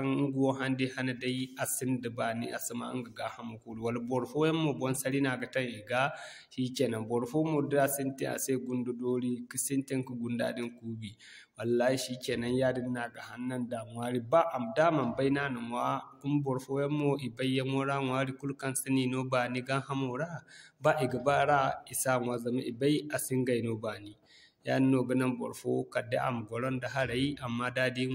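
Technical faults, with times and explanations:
No technical faults are audible.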